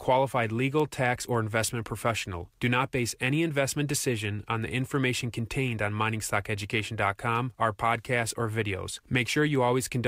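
Word clock ticks run from 0.25 to 9.55 s. They are sharp, uneven clicks about every half second, roughly twenty in all. The receiver's clock drifts by roughly 40 ppm against the sender's, so single samples are dropped or repeated.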